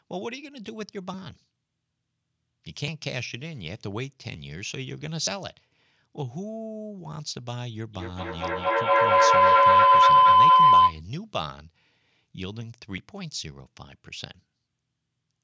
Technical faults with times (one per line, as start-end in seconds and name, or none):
1.14 dropped buffer (overrun)
2.88 dropped buffer (overrun)
4.34 dropped buffer (overrun)
5.27 dropped buffer (overrun)
7.94-11.05 feedback howl
12.98 dropped buffer (overrun)